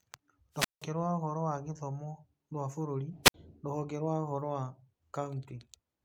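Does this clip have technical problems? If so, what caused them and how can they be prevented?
Yes. Wireless microphone squelch dropout: the analogue FM radio signal faded until the receiver's squelch muted the output, so static rises, then a gap of near silence. This happens from 0.53 to 0.86 s (about 172 ms muted) before "rwa ũhoro wa gĩthomo", and from 3.23 to 3.34 s (about 62 ms) between "wa gĩthomo rwa bũrũri" and "rũhonge rwa ũhoro wa". Keeping a clear line of sight, shortening transmitter-to-receiver distance, and using diversity receivers with fresh batteries prevents it.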